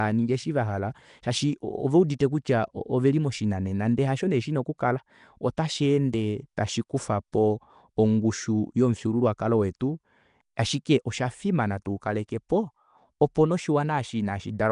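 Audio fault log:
Throughout: likely Nellymoser compression. Bands with too few bits are refilled with noise, giving the speech a rough, hissy halo and an underwater smear. Nothing sounds above 10.6 kHz.
2.19, 5.57, 7.32, 12.28, 12.49 s: pre-echo. A brief hiss leads each sharp onset by 10 to 12 ms. Coding noise spread across the block arrives early and softens the attack.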